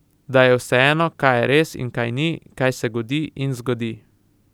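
Nothing goes wrong in this stretch of speech; there's no technical fault to point to anywhere along the way.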